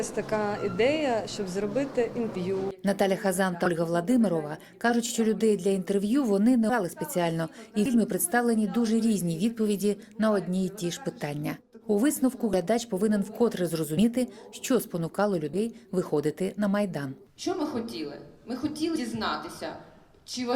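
Compressed frames are skipped at 3.65–3.68, 6.69, 7.85–7.88, 12.53, 13.97–14.01, 15.53–15.58 and 18.95–18.98 s. Missing or rejected frames make the sound jump ahead by roughly 70 ms to a fifth of a second, with a short blip or click at each join.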